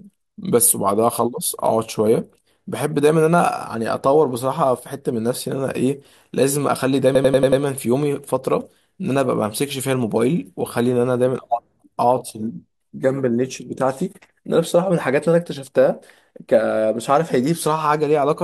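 A system hang loop in this speech clip, from 7.15 to 7.62 s, repeats one 93 ms slice five times at 10.8 Hz, a machine-gun stutter fitting a frozen 4096-sample ring buffer.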